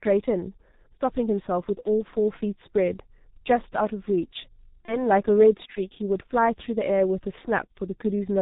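G.723.1 codec damage runs through the whole speech clip. The codec keeps nothing above 4 kHz and models the voice in coarse 30 ms steps at a very low rate, which fits its 6.3 kbit/s mode. The result is heavily muffled, hoarse speech with smeared consonants.

VoIP packet loss concealed by the speech codec appears at 1.83 to 1.89 s and again at 4.86 to 5.02 s. Each gap fits a single lost 30 ms frame. The decoder fills it by repeating its last pitch and filter at falling gain, giving a brief buzzy tone or coloured noise that fades, and the voice stays weak until the following frames recover.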